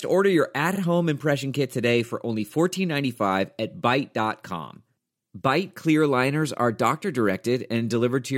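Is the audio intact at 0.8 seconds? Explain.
No, not quite. Right around there you've got repeated frames, from 0.75 to 0.79 s. A 46.4 ms block of the compressed stream was played twice, which fits two frames getting written or sent again, so the decoder just replays that slice of speech. You hear it as a quick stutter. It also stretches the clip by 46.4 ms.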